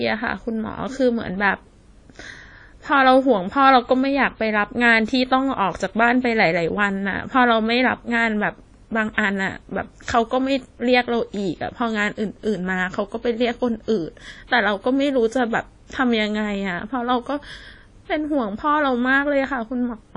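From start to finish the speech carries plainly audible codec damage. It sounds washy and ringing, with a hiss that swells and fades along with the voice. Nothing is heard above 10 kHz, so the top end is dull. The likely cause is WMA compression at a low bitrate, consistent with roughly 32 kbps. Its long transform blocks smear quantisation noise over tens of milliseconds. Faint detail is discarded entirely.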